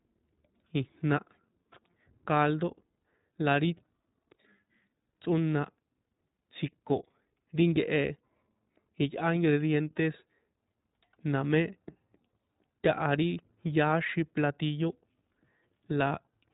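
iLBC codec damage runs through the whole speech clip: nothing passes above 3.8 kHz, and independently coded frames leave a rough, synthetic edge, consistent with 20 ms frames at around 15 kbps.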